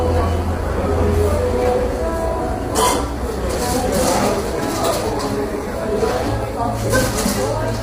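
Low-delay AAC compression, likely AAC-ELD at a low bitrate of around 24 kbps, affects the entire recording. Because this codec works on very short frames, it resolves closely spaced frequency detail coarsely and must spread a small bit budget thinly. The damage is heavy: the sounds come out rough and grainy, noise fills the gaps between tonal components, and the upper frequencies are dulled or carry a synthetic, smeared sheen.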